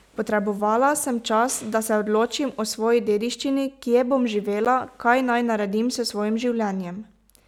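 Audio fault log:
4.65 s block of digital silence: the speech drops to silence for about 12 ms, which fits a 512-sample buffer left unfilled, then returns. With no fade at either edge, it is heard as a sharp tick rather than a soft gap, unlike a smoothed dropout.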